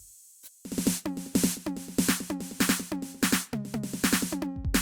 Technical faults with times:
none

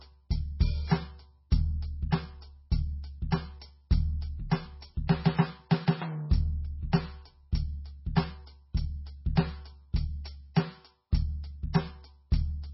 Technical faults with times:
0.00-12.73 MP3 compression

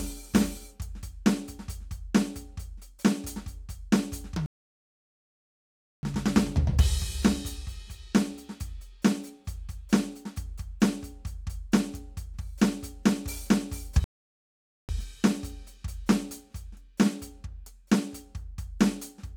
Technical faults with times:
4.46-6.03 rebuffering stall
14.04-14.89 rebuffering stall

